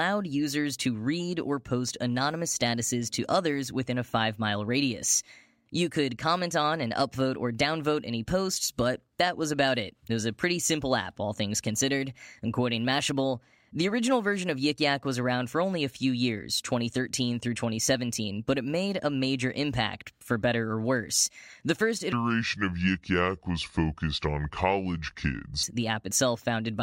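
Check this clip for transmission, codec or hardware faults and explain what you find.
One fault shows up, a section at the wrong speed from 22.12 to 25.63 s. The speech runs at 0.653 times its proper rate, around seven semitones low, so it sounds deep and dragging. Likely the section was played against a slower clock than it was recorded with, shifting pitch and tempo together.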